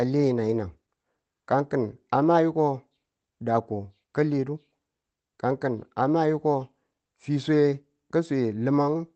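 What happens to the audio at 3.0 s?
At 3.0 s the audio sits inside a stretch of repeated timing corrections that runs from 0.23 s to 9.04 s. The receiver is trimming short slices out of the stream so that its playback keeps pace with the incoming audio, which arrives about 5 percent faster than it consumes it. The effective playback rate across this span is 105 percent. Each edit is small, so around 3.0 s it comes through, if at all, as a faint hiccup or a slightly uneven tempo rather than an obvious gap. The edits all go the same way, removing material, but the spacing between them is irregular.

The underlying cause is clock drift between sender and receiver, which runs through the whole clip. The sender's sample clock runs fast relative to the receiver's, so the jitter buffer keeps filling and has to be drained by discarding short pieces. That produces the recurring, unevenly spaced timing glitches heard at 3.0 s and elsewhere. 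The speech reaches the listener through the Opus call path, limited to an 8 kHz bandwidth.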